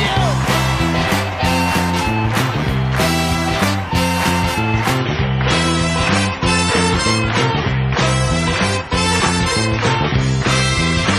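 At 4.98 s the audio switches abruptly, with no gap, to an adaptive stream at a lower bitrate and stays there to the end. The connection slowed, and the sound fits a drop from 128 to 32 kbit/s MP3. The treble is gone above 11.5 kHz and the top end turns thin, with more codec artefacts.

At 9.21 s there's a repeated buffer. Fresh data didn't arrive in time, so the last chunk got played a second time, hard-joined to itself. The piece is tiny, which fits a buffer of about 5 ms, so it comes across as a quick click or brief buzz, not a stutter.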